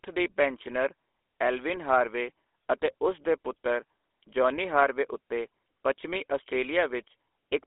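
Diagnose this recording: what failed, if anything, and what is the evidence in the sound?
The fault is at the codec stage: GSM full-rate coding, present for the whole clip. The speech has a buzzy, gravelly roughness and nothing above about 3.5 kHz or below 300 Hz. Pulse-driven vocal-tract modelling, which fits a 13 kbps GSM stream, causes this plainly audible damage.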